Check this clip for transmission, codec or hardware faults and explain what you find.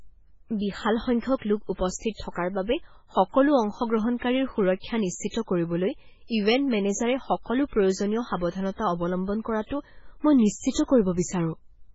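One codec fault runs through the whole speech recording.

Throughout, the audio sounds watery and swirly, with metallic chirps on s sounds, smeared attacks and nothing above 7.7 kHz. This is likely heavy MP3 compression, consistent with a very low bitrate near 16 kbps. Starved of bits, the encoder cuts the treble and zeroes weak frequency lines that flicker on and off between frames.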